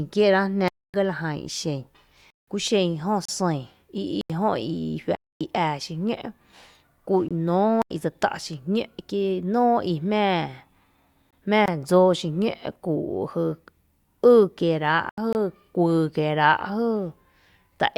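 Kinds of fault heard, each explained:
Block of digital silence: The speech drops abruptly to dead silence and returns, heard as holes of about 21 to 256 ms at 0.68, 2.30 (just after "jan ixen"), 4.21, 5.15, 7.82 (just before "i dse tá’"), 11.66 and 15.09 s. Each time a stretch of samples was replaced with zeros, probably because output buffers went unfilled. The 85 and 171 ms holes fit blocks of 4096 and 8192 samples.
Gap between stream segments: Short hard-edged holes of about 21 to 31 ms break the speech at 3.25, 7.29, 11.31 and 15.33 s, recurring every 4 s. The timestamps of consecutive segments don't quite join, and the player fills the mismatch with silence. The steady spacing suggests 4-second segments. Nothing is lost here; a little extra time is inserted at each segment boundary.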